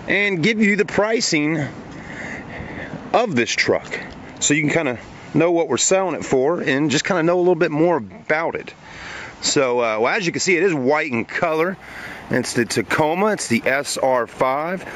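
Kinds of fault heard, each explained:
Imaging from linear upsampling: from about 11.48 s to the end, the sound has been raised in rate by simply joining samples with straight lines, which filters poorly. The top of the original band goes dull, and a mirrored copy of it sits between 8 and 16 kHz, roughly 20 dB below the main signal, which fits a 16 kHz source lifted to 48 kHz. You hear it as a faint metallic shimmer on the brightest parts.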